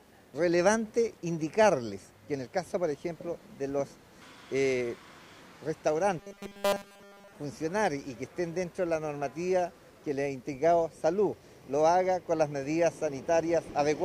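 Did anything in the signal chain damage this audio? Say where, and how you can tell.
Yes, at the driver or buffer stage. From 6.19 to 7.33 s the sound turns into a rigid, metallic 200 Hz buzz, robotic sound from repeated short buffers. Fresh audio was likely arriving too late, so essentially the whole stretch is a roughly 5 ms chunk looped over and over.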